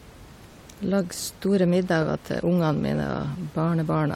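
No technical faults can be heard anywhere in the speech.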